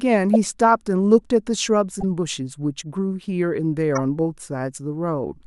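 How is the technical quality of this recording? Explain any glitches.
Corrupt frames decoded: the speech is marred by three short glitches where damaged compressed frames were played anyway. Flipped bits in each frame made the decoder misread gains and spectral codes, placing energy at the wrong frequencies for as long as the damage lasted. At 0.34 s a single bad frame gives a sharp blip peaking near -10 dBFS. From 1.99 to 2.04 s and 3.95 to 4.00 s, a run of several frames produces brief chirpy noise bursts, each about -15 dBFS.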